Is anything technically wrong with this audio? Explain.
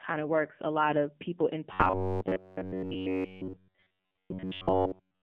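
Yes. The whole clip has passed through an AMR narrowband mobile codec. The speech is confined to roughly 150 Hz to 3.5 kHz with nothing above. Low-bitrate vocal-tract modelling leaves a plainly audible buzzy, synthetic quality, consistent with a rate around 7.4 kbps.

From 1.73 s to the end, the speech becomes a rigid metallic buzz at a fixed pitch of about 94 Hz. It still loosely follows the speech. This is robotic sound, likely from repeated short buffers: a segment of roughly 10.7 ms is replayed continuously while new audio is skipped.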